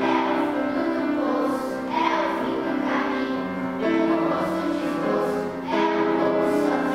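No technical faults can be heard anywhere in the audio. There is no moment that calls for a timestamp or a closer look.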